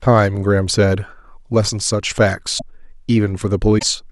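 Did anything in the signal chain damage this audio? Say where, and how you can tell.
Yes, likely a broken MP3 bit reservoir in the codec: frames after gaps misread borrowed bits, so sound skips and garbles at 2.58–2.62 s and 3.78–3.83 s.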